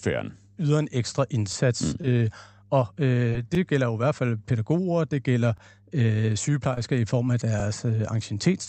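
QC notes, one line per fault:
1.53–1.55 s, 3.55–3.58 s, 5.58–5.60 s: overlapping chunks. After "yder en ekstra", before "gælder jo i hvert" and after "fald pædagoger det gælder", about 25 ms replays at each join, every 2 s. That steady spacing and the literal repeat set it apart from random dropouts.
2.02–2.06 s, 3.30–3.33 s, 6.74–6.79 s: short concealed packet loss. About 20 ms of audio never arrived and was bridged by extending the preceding sound. It is heard as a brief smear or wobble at irregular times, with nothing audibly repeated, unlike the chunk joins.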